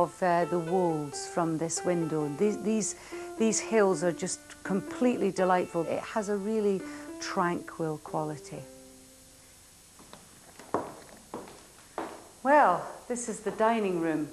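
No technical faults can be heard anywhere in the audio.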